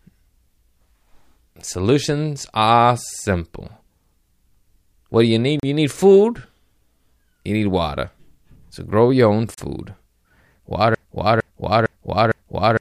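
At 5.60 s after "do you need" and 9.54 s after "grow your own", a block of digital silence cuts in for about 35 ms, a flat silent stretch, showing as vertical spectrogram stripes. From 10.95 s to the end, a broken-record loop repeats a 0.46 s fragment, likely from a stalled player, as identical waveform chunks tiling back to back.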